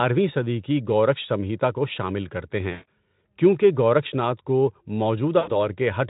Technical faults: VoIP packet loss concealed by the speech codec

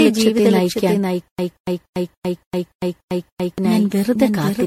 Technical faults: doubled audio track; generation loss; stutter with silent gaps

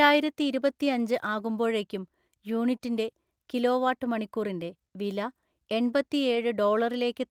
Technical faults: short concealed packet loss; lost packet rebuilt from error correction

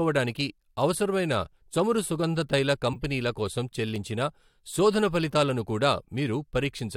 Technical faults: corrupt frame decoded

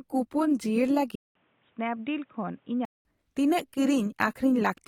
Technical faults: input switched to a poorer device

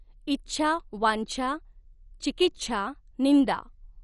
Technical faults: MP2 compression

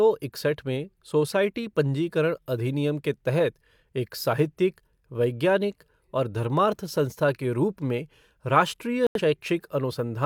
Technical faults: digital broadcast dropout

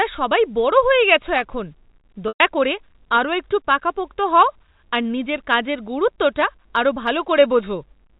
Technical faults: packet loss with pitch repetition

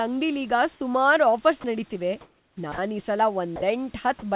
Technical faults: sound dropped by the voice detector; comfort noise in place of the background

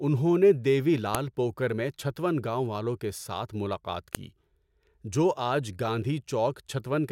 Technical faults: file header played as audio

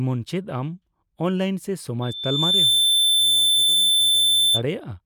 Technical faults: loudspeaker feedback squeal

